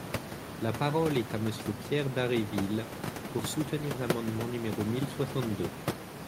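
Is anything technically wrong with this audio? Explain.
No, nothing here is technically wrong; the only thing in the background is some room noise sitting about 9 dB below the speech, and that belongs to the space the microphone was in rather than to anything in the recording chain.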